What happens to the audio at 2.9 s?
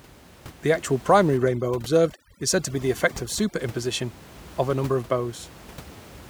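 At 2.9 s the speech is inside a stretch of overdone noise removal from 1.37 to 3.59 s. An over-aggressive noise reducer is cutting frequency bands that sit near its noise estimate, which leaves the background dropped and broken into twinkling specks.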